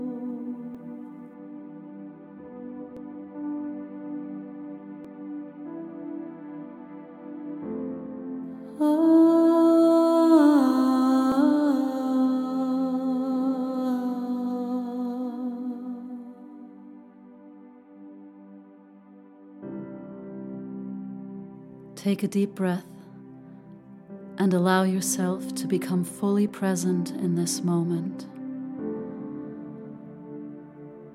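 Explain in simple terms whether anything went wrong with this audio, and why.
You'll hear a tiny jump forward at 0.75, 2.97, 5.05, 11.32 and 26.49 s. That's likely a dropped buffer (overrun): the recorder fell behind, so a sliver of sound, around 10 to 20 ms, got overwritten and skipped.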